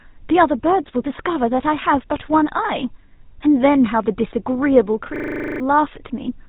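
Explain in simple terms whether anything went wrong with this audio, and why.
The whole clip went through the old GSM full-rate codec, a phone-call compressor. It cuts everything above 3.8 kHz, so the speech sounds muffled, buzzy and gravelly.

From 5.16 to 5.6 s there is a system hang loop. The computer froze, and one 40 ms scrap of audio repeated 11 times, a rattling stutter at 25 per second. Roughly 0.4 seconds of real sound is lost.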